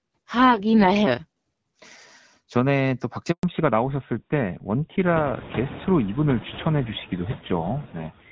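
It's a phone-call speech recording, and there are noise suppressor artifacts running the whole way through. The suppressor pulls the steady background down by about 13 dB frame by frame, so the noise floor drops away in the pauses and comes back up under the talking. The room noise itself climbs by about 24 dB around 5 s. At 3.31 s there's a handover gap: the sound dies out and stays silent until 3.43 s, about 120 ms with nothing coming through while the call switched networks, so whatever was said in that window is just gone. Right after it, from 3.43 s to the end, you get the fallback to narrowband. Everything above 4 kHz disappears, and compared with the first part the voice goes duller and rougher. That drop in bandwidth and the change in texture fit a switch from HD Voice, with AMR-WB at 12.65 kbit/s before the gap, down to GSM full rate at 13 kbit/s after it.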